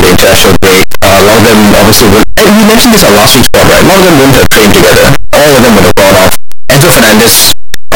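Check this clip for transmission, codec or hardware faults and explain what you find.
The speech is wrecked from start to finish by one fault, a signed and unsigned mix-up.

Throughout the clip the sound is a harsh, buzzing roar. Soft syllables are as loud as the peaks. The likely cause is 8-bit samples read with the wrong sign convention, which flips the top bit. Each zero crossing then leaps across the full range, turning quiet moments into large jumps. Ordinary clipping or overload flattens only the loud peaks and leaves silences quiet, so that is what separates it from this fault.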